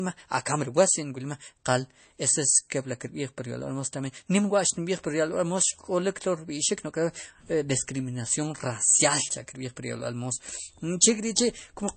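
MP3 compression throughout: nothing above 8.3 kHz, with plainly audible watery swirl on the speech, likely from an encoder starved of bits, which fits about 32 kbps.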